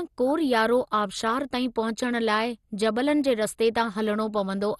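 Throughout the speech, the sound is dull and gurgling, with a granular roughness, likely from MP2 compression at a low rate consistent with 64 kbps. Starved of bits, upper sub-bands switch off. A spectrogram shows nothing above 12.2 kHz and flickering, blocky patches below it.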